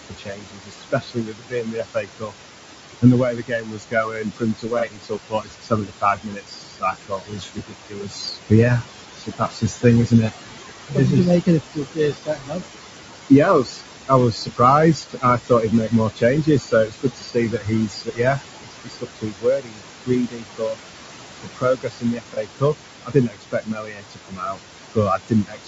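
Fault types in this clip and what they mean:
Noise suppressor artifacts: The suppressor pulls the room noise down by about 20 dB in the gaps, so the background, only about 8 dB under the speech, pumps between pauses and phrases. Unlike codec damage, it follows the speech level.
Low-delay AAC compression: Throughout, the speech sounds rough and grainy, with noise between the harmonics and a dull, artificial top band. The likely cause is AAC-ELD at 32 kbps, whose short frames smear pitch detail. It stays constant rather than tracking pauses.
Speech cut by the noise suppressor: Soft sounds are turned down with the background by about 20 to 22 dB at 0.09 to 2.34 s, 3.02 to 10.32 s, 10.88 to 10.98 s, 11.44 to 12.67 s, 13.3 to 14.61 s, 14.94 to 20.8 s, 21.43 to 24.61 s, and from 24.95 s to the end. The cuts just before and after "did you make" are examples. They sound swallowed, not noisy.
AAC frame loss with concealment: At 4.79 s, 12.2 s and 22.34 s, a single lost frame of about 30 ms is patched from the previous spectrum. 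Each leaves a brief smeared, phasey blip about 40 to 50 ms long, a momentary texture change rather than a level drop.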